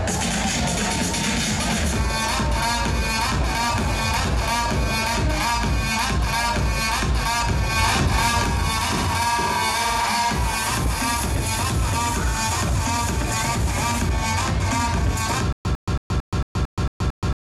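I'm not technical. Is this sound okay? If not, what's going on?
No. From 15.53 s to the end, there is a stutter with silent gaps. A 0.1 s burst repeats eight times, each followed by 0.12 s of silence. The stream likely stalled and kept replaying its last fragment. The real ending is lost.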